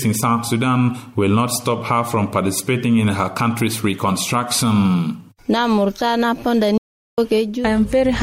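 From 6.78 to 7.18 s, an audio dropout to silence leaves 0.4 s of dead silence. Sound cuts off abruptly, likely from a lost input link.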